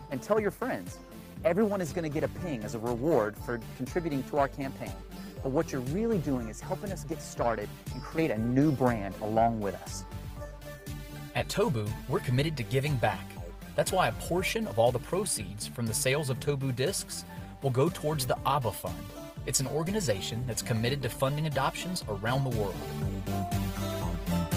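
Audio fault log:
No fault is found in this audio.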